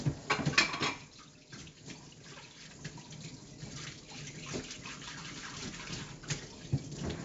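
Throughout, 4-bit ADPCM compression leaves gritty hiss riding every loud passage, unlike swirly perceptual-codec artefacts, with nothing above 7.7 kHz, which fits a 16 kHz sample rate.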